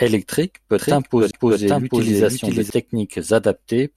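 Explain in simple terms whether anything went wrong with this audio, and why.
From 0.79 to 2.70 s, the speech plays twice. A second copy, about as loud, trails half a second behind. This doubled audio track likely comes from a slower second recording path.

At 1.31 to 1.33 s there is a CD skip. A very brief silence, then the sound jumps to another spot.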